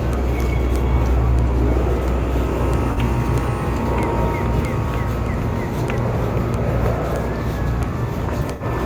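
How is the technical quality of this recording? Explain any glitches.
Two brief smeared, noisy patches interrupt the sound, at 2.93 s for about 43 ms and at 8.52 s for about 85 ms. These are AAC frame loss with concealment: the decoder, missing roughly two and then four frames, rebuilt each gap from the last good spectrum.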